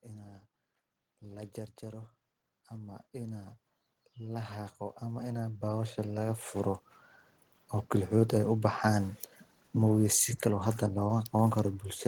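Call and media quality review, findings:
Automatic gain rising, twice. 1.22 to 3.60 s: level swells by about 6 dB, voice and background together. AGC reading the input as too quiet, ramping its gain up. Again 4.15 to 6.86 s, bigger, about 11 dB over nearly three seconds. Same AGC behaviour, worth checking its target level.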